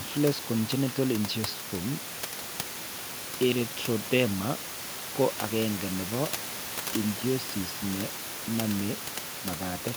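No technical faults can be heard in the speech, and the room's background noise sits at about 12 dB below the voice as part of the recording.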